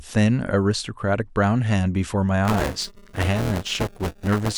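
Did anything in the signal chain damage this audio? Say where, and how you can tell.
Yes, buffer tearing at the driver or buffer stage from 2.45 s to the end. The 200 Hz robotic buzz fits a 5 ms period: writer and reader cross, so about a fifth of each buffer replays audio around 10 ms old. Unlike isolated dropouts, the buzz is continuous and present only with signal.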